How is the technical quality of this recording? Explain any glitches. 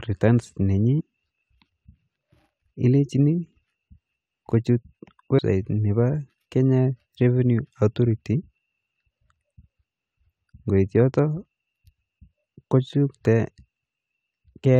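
Two brief glitches mar this speech recording, both caused by damaged data in a compressed stream. Just after "returns nenyi", from 0.99 to 1.01 s, a short glitch cuts in, and a shorter one follows at 5.38 s. Corrupted bytes at those points make the decoder misread the frames and lose sync until it locks onto the next frame header.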